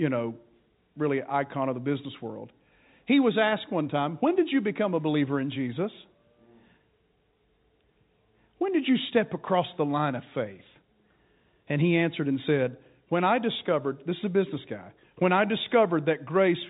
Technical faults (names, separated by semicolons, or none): none